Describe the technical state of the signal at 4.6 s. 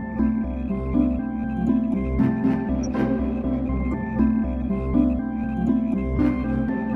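A corrupt frame decoded from 4.61 to 4.64 s: damaged bits in a couple of frames misplace energy, giving a brief chirp, blip or burst of noise near -25 dBFS.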